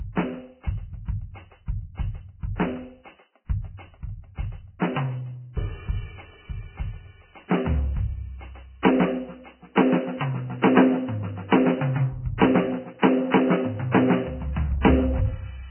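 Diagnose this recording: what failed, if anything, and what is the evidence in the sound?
The codec stage is at fault: the music sounds hissy and grainy throughout, with roughened tones, and nothing remains above 3.1 kHz. This is likely heavy Vorbis compression, consistent with a very low bitrate near 10 kbps. A spectrogram shows a hard ceiling at 3.1 kHz and speckled, noisy upper bands where coarsely quantised detail has turned to noise.

Pre-echo, also from the codec, occurs from 8.82 to 8.85 s. A short hiss lasting about 24 ms runs ahead of a sharp attack, which sounds softened. Quantisation noise spread across the whole transform block fills the quiet gap before the hit, appearing as a low smear preceding the transient on the waveform.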